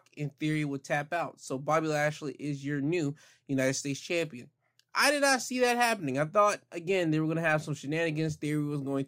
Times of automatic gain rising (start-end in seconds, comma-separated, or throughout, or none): none